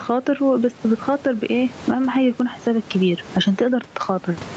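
Gain pumping runs through the whole speech clip: the gain is pulled down on each loud sound, a swing of around 20 dB, with room noise sitting about 29 dB below the speech. The likely cause is gain set far too high, with a fast limiter clamping down on each peak. Unlike a noise gate, the background never falls to silence, and the speech itself sounds flattened and squashed.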